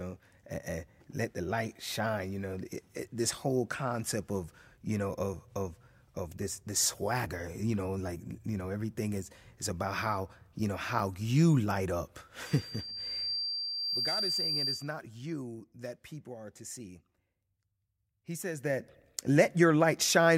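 A microphone picking up its own loudspeaker creates a loop with gain above one at 4.7 kHz, producing loudspeaker feedback squeal from 12.46 to 14.94 s, just after "how you light up". The tone swells over roughly a second and a half to about 10 dB above the speech, ending before "you that people are".

From 13.31 to 13.74 s, a level cut of about 15 dB is applied in unsmoothed 1 dB steps, roughly 30 per second, causing zipper noise: a fast ticking over the sound. The same zipper noise returns from 18.52 to 18.94 s as the level rises again by about 15 dB.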